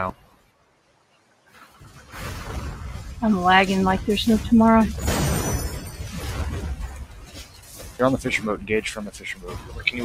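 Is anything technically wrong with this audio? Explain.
Yes. A noise suppressor meant for speech was applied to music or sounds, and it runs through the whole clip. It treats steady tones, ambience and reverb as noise and turns them down. The level keeps shifting, with gain losses swinging by around 15 dB.

The sound is cut by the noise suppressor in three stretches: 0.14 to 2.13 s, 6.88 to 8.0 s, and 9.1 to 9.9 s. Here the suppressor judged the sound to be noise and pulled it down harder. The deepest drops are about 14 dB, then about 12 dB twice.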